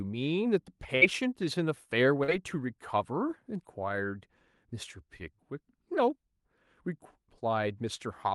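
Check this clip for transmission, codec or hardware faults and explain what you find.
Two transmission faults are present, both from packets that failed to arrive in time.

At 0.95 to 1.03 s there is a burst of packet loss: several consecutive packets never reached the decoder, so the receiver extended the last received sound for about 60 ms while fading it down. That stretch comes across as a held, dimming continuation of the preceding sound. When real audio resumes, about 60 ms of the original has been skipped, so the sound jumps forward rather than picking up where it left off.

At 2.23 to 2.30 s there is a short concealed packet loss: a brief gap in the incoming stream left the decoder with nothing to play, and it synthesised roughly 44 ms of fill from the preceding sound before blending back into the arriving audio. The result is a quick smear or wobble rather than a hard break, with about 40 ms of the original sound lost underneath it.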